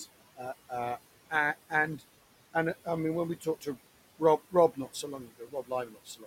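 From start to finish the background pumps down in the gaps and swells back under the speech. These are noise suppressor artifacts: the room noise, which sits about 17 dB below the speech, is pulled down by about 17 dB frame by frame.

Right after "I mean when we", between 3.41 and 3.77 s, parts of the speech go faint and swallowed, dipping by up to about 12 dB over roughly a sixth of a second. This is speech cut by the noise suppressor, which mistook those softer sounds for noise. It happens again from 4.71 to 5.03 s, dropping up to about 14 dB over a brief stretch. From 5.23 s to the end, about half a second of speech in total is turned down by up to about 17 dB, the full depth of the noise reduction.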